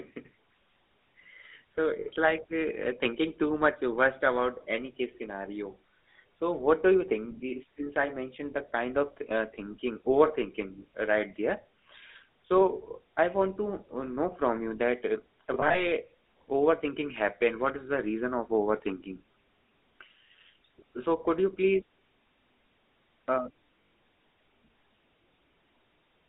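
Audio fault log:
Throughout: GSM full-rate codec. The speech has a plainly buzzy, gravelly roughness, consistent with 13 kbps full-rate coding, inside a narrow 250 Hz to 3.7 kHz band. Unlike a simple low-pass, the grit persists inside the band because the pulse-driven excitation is coarsely quantised.
2.00–2.08 s, 15.54–15.87 s, 23.82–23.92 s: lost GSM frames. Each gap is held as a brief metallic ring rather than silence or a click, as the last good frame repeats: 60 ms ending just before "like uh thinking too", 80 ms scattered in short bursts across the middle event, and 100 ms at the end.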